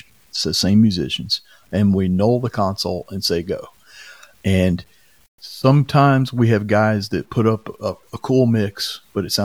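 Across the whole speech clip there is grainy distortion that rides on the sound, roughest in quiet passages and fading tails, around 40 dB below the signal. This is low bit depth without dither, likely a truncation to about 9 bits. On a waveform, quiet stretches look stair-stepped, and the spectrogram shows broadband grit that tracks the signal.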